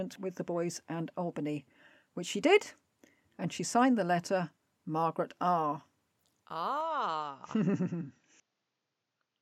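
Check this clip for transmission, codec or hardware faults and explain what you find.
One fault is present. At 6.81 s the input appears to switch to a poorer device, and it stays that way to the end. The cause is likely a change of microphone or input profile mid-recording. From that point nothing reaches above 7.6 kHz. The speech turns duller and boxy. A faint new noise floor appears, about 50 dB below the signal. There is no gap at the switch, and the level stays about the same.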